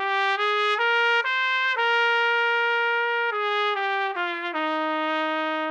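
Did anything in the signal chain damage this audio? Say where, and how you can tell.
No, nothing along the chain has audibly damaged this audio, and the signal arrives at playback with its level, continuity and frequency content intact.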